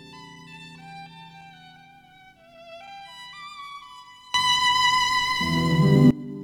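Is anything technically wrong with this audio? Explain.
Yes. From 4.34 to 6.11 s there is a sudden gain jump of about 23 dB. Sound and background noise leap up together, likely from a gain change applied without a ramp.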